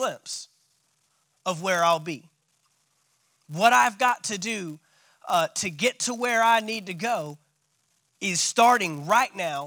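From start to finish, a buzz sits under the speech at about 172 Hz. It comes from a filter restarted on every block. The filter drops its memory at each block boundary and begins again from silence. That leaves a small transient at the start of every block. The repeat rate fits a 256-sample block. The ticks blur into a steady buzz. It grows louder with the speech and fades when the level drops.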